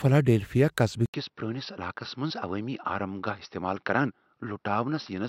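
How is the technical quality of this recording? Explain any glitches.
The recording has one clear glitch. At 1.06 s there's an 80 ms gap, then the speech turns dull and a bit quieter, with nothing above 5.8 kHz and a faint new noise floor, likely an input switched to a poorer device.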